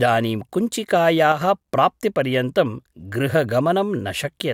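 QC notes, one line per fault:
1.32–1.41 s: one channel drops out, likely from a lost stereo side; the mono sum dips abruptly by about 6 dB, a brief full-band notch in waveform and spectrogram.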